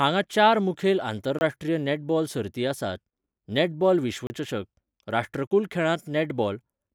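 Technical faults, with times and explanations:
1.39 to 1.41 s, 4.27 to 4.30 s and 5.47 to 5.51 s: blocks of digital silence. Three times the audio path failed to deliver samples, most likely because the output buffer was not filled in time, so stretches of 24 ms, 30 ms and 38 ms were replaced by zeros. The speech drops straight to dead silence and returns with no fade, leaving a short hole.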